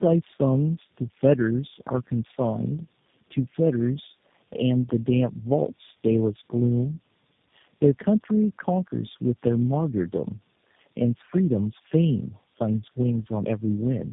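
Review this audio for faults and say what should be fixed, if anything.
The speech throughout has tandem speech coding: three speech codecs in a row, each re-coding the last's damage, leaving it rough, warbly and muffled, with nothing above 3.7 kHz. Keep the call in one codec end to end, or pass coded frames through transparently.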